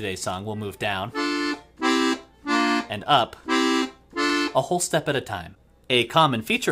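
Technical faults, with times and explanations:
4.30 s, block of digital silence: the audio drops out for about 0.36 ms, which fits a 16-sample gap, then resumes. There is no fade at either edge. The abrupt jumps into and out of silence make a tick or dip rather than an audible hole.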